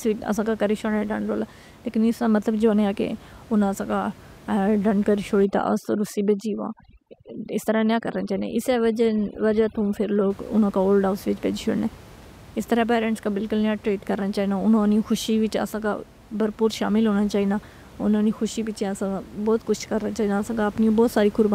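From 5.45 s to 10.30 s, just after "ڈانڈ کری", there is overdone noise removal. The noise reduction was pushed too hard. It drove individual frequency bands down or to nothing wherever they came close to its noise estimate. The soft parts of the speech were cut along with the noise. The room noise, sitting about 23 dB below the speech elsewhere, drops and breaks up into twinkling specks.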